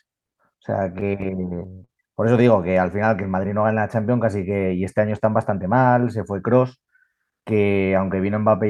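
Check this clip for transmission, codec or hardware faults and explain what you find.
Three transmission-side faults turn up, all from the receiver's jitter buffer: a run of stalls, a stretch slowed down, and a stretch sped up.

Between 0.79 and 1.90 s there are repeated stalls (stutter). Packets were arriving late or too slowly for playback, so the jitter buffer kept running dry, and each time the receiver extended the last sound to bridge the wait. Six short hitches add about 84 ms of filled-in audio, the longest around 33 ms. Nothing is lost, but the speech drags and catches in small repeated jolts.

From 2.96 to 3.48 s comes a jitter buffer slow-down. With its reserve running low, the receiver rebuilt it by repeating single pitch periods or slivers of pause over and over, adding about 39 ms. The speech plays at roughly 94% of normal speed while the pitch stays put, so sounds come out slightly stretched and drawn out.

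Between 5.49 and 5.73 s there is a jitter buffer speed-up. The buffer held more audio than it aimed for, so the receiver trimmed short chunks of one or a few pitch periods in quick succession, removing about 40 ms. The speech plays at about 113% of normal speed at unchanged pitch, giving a brief hurried, clipped quality.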